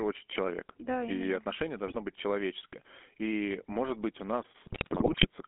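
Right through the speech there's GSM full-rate codec coloring: pulse-driven vocal-tract modelling gives a buzzy, gravelly edge, with the band held to about 200 Hz–3.4 kHz. Then GSM bit errors hit twice: 1.88–1.97 s, just before "быть человеческое", and 4.64–5.27 s, after "может быть у". Corrupted decoder parameters produce squawks, pops and gargling, the second burst longer and messier.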